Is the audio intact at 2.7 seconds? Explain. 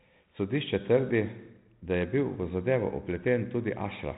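Yes, the audio is intact at 2.7 seconds, with only the light G.726 coding at 32 kbit/s that runs through the whole clip and holds everything below about 3.9 kHz.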